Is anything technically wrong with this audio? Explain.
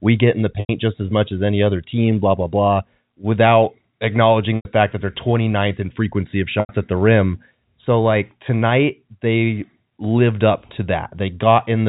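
Yes. Packet loss with pitch repetition occurs at 0.60–0.69 s, 4.56–4.65 s and 6.60–6.69 s, each gap about 90 ms long, which fits three lost packets. The receiver repeats the last pitch period and fades it over about 50 ms, so each gap holds a brief buzzy note, then silence, before a short cross-fade back into the G.711 telephone-band speech.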